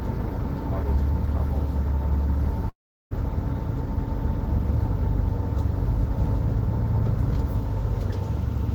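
At 2.69 s the sound abruptly turns into a smeared buzz that fades away, leaving about 360 ms of near-silence before the audio picks up again at about 3.13 s, with roughly 420 ms of material simply gone. This is likely a long network dropout: the stream stopped arriving, so the receiver stretched the last sound it had into a decaying fill for about 413 ms, then fell silent until fresh audio resumed past the lost stretch.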